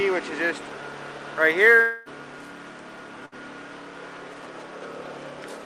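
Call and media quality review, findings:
Long network dropout, 1.81 to 2.09 s: sound continues as a synthetic fading fill for about 0.24 s, no true silence, then resumes past the gap. Likely receiver-side concealment covering roughly 240 ms of audio that never arrived.

Burst of packet loss, 3.26 to 3.35 s: brief held, decaying fill of about 60 ms, then audio jumps ahead. Packets for that span were lost or arrived too late to play; concealment extended and attenuated the last sound before playback resumed.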